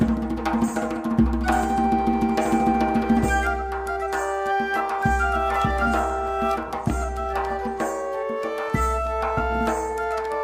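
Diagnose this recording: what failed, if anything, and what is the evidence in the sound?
Nothing failed here: no stage in the chain, from wiring and converter through to playback, leaves a fault you can hear anywhere in the recording.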